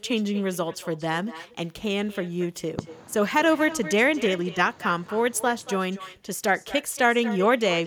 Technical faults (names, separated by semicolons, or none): echo with no canceller